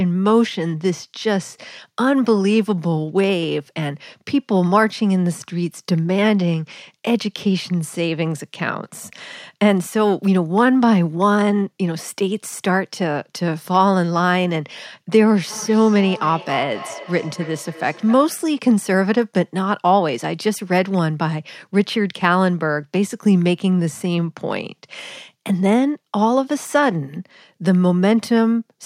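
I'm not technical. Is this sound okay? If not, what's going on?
No. From 15.5 to 18.4 seconds there is feedback echo between two devices. Two devices in one room share the call, so one microphone picks up the other's playback, which its echo canceller can't remove. The speech repeats about every third of a second.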